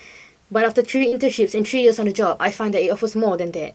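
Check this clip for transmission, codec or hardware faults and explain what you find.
Three transmission faults appear in this speech, all on the Opus call path. Its bandwidth is 8 kHz.

Short stall from a late packet, 0.97 to 1.02 s: A packet arrived late, the jitter buffer emptied, and the receiver held the last sound for 26 ms before resuming with nothing lost. It sounds like a briefly sustained syllable. On a spectrogram, the harmonics run flat and frozen for that stretch.

Short concealed packet loss, 1.08 to 1.14 s: About 40 ms of audio never arrived in time. The decoder filled 38 ms by extrapolating the preceding sound, then blended back into the real signal. It is heard as a quick smear or wobble. In the waveform, a smooth, repetitive patch replaces the natural detail.

Call bitrate drop, 1.34 s to the end: The bandwidth estimate fell, so the encoder went from 32 to 14 kbps and stayed at its lowest for about 1.2 s. 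The coarser coding makes the speech rough and watery. On a spectrogram, the fine texture turns blotchy and smeared.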